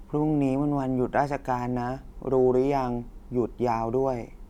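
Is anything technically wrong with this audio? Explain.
No, nothing is technically wrong with this audio.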